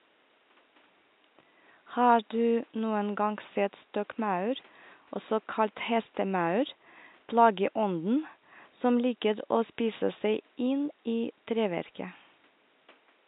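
No technical faults are audible.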